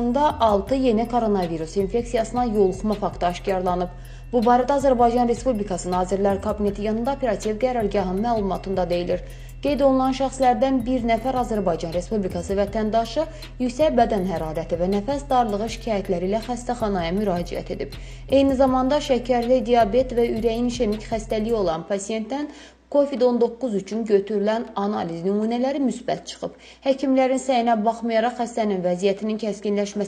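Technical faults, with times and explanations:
Nothing here to flag: no technical faults turn up anywhere in this clip.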